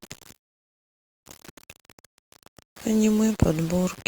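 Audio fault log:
throughout: low bit depth without dither. Grainy distortion rides on the speech itself, about 20 dB down, fitting likely 6-bit rounding.
0.35–1.25 s: call audio freeze. A short continuation of the last sound fades into nearly 0.9 s of silence, then speech resumes exactly where it stopped with nothing skipped, likely a starved jitter buffer.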